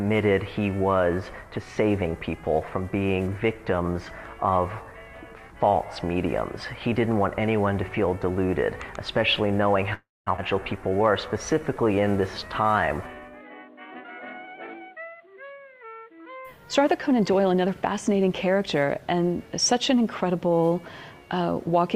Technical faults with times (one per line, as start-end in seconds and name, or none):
9.93-10.29 call audio freeze
10.37-10.40 skip ahead
10.78-13.22 jitter buffer slow-down
13.90-15.05 jitter buffer speed-up